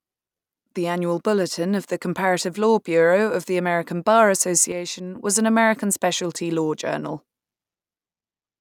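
At 4.72 s the speech and its background noise drop together by about 6 dB in a single step, with no fade, and stay down until 5.16 s, just before "was an". This sudden gain jump most likely comes from a digital gain setting applied without a ramp.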